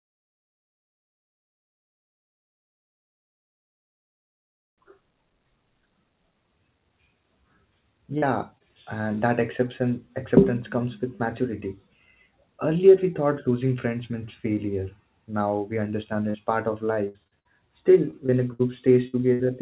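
Short concealed packet loss shows up at 8.18–8.24 s, at 8.58–8.62 s just before "and that", and at 16.30–16.36 s before "part of". Each time, a few tens of milliseconds went missing and were patched by stretching the last sound, which leaves a quick smear.

Repeated packet loss (robotic sound) follows at 17.08–17.47 s, right after "part of", and again at 18.11–19.41 s. Back-to-back holes of up to 66 ms keep getting filled in, so the sound turns choppy, with pieces missing.

All of this sits on narrowband call audio with nothing above 4 kHz.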